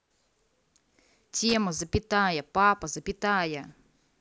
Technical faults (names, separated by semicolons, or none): loose connector crackle